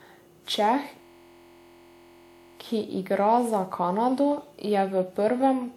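Across the whole clip the speech has a swirly, hollow, smeared quality, with consonant attacks blurred more than a single decent encode would explain. This is likely generation loss, with the audio lossily encoded and decoded around ten times over. The character points to WMA at about 128 kbit/s. Each pass requantises on a shifted frame grid, so the damage compounds. On a spectrogram the band reaches 20.1 kHz but shows patchy holes and smeared onsets.

From 1.02 s to 2.60 s a system hang loop takes over. The driver stalled while the hardware kept replaying one 23.22 ms slice of its ring buffer, which fits a 1024-sample buffer. It repeats 68 times at 43.1 Hz, producing a steady buzzy drone instead of speech until normal playback resumes on "ki igra za", with little or nothing lost. The waveform shows an identical repeating cycle, and the spectrogram shows harmonic stripes spaced at 43.1 Hz.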